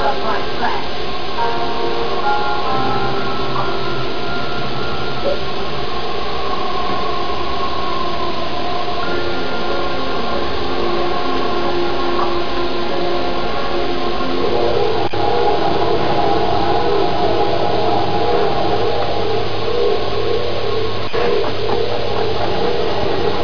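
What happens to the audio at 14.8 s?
Nothing goes wrong at 14.8 s: the audio plays through that moment intact, with no dropout, click or other disturbance.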